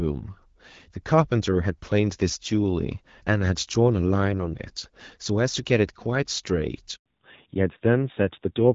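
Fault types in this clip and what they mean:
Handover gap: The call was passed from one network to another, and no speech frames got through while the link switched over. Here the speech dies away at about 6.96 s and stays silent for 100 ms, until roughly 7.06 s, when the new connection starts carrying audio again. Whatever was said during that tenth of a second is lost, and nothing fills the hole.
Fallback to narrowband: Right at the handover, the call lost its HD Voice coding and dropped to an older narrowband codec. Before this, light AMR-WB coding had kept the speech clear up to about 6.4 kHz, with shaped noise filling the band to 7 kHz. The rougher texture afterwards fits a low rate of around 7.4 kbit/s. From 7.06 s to the end, nothing above 4 kHz remains, so the speech turns duller, more muffled and grainier than in the first seven seconds.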